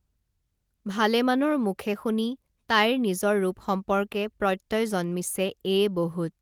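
Nothing in this recording trips any alarms: no moment along the way stands out as a technical fault.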